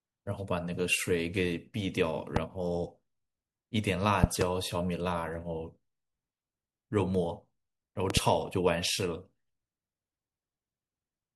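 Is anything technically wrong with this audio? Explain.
Yes. Loud pops occur three times: a single pop at 2.36 to 2.39 s, and a pair each at 4.24 to 4.44 s and 8.10 to 8.19 s. Each peaks about 20 dB above the speech, which continues underneath. The likely cause is a sudden voltage pulse added to the signal.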